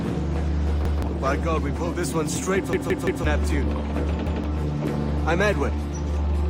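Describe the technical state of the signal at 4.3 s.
Right around there you've got a repeated buffer, running from about 4.27 to 4.44 s. Fresh audio didn't reach the output in time, so the device played its last block a second time. You hear that chunk of sound twice in a row with a hard seam where it restarts: a short stutter. The repeat lasts about 171 ms, which fits an 8192-sample buffer, and around 150 ms of the real audio gets skipped.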